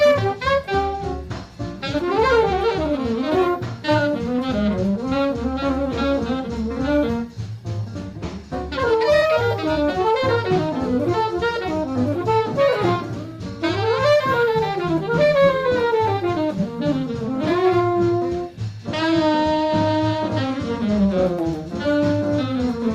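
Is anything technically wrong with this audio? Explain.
No, nothing in the recording stands out as a technical fault.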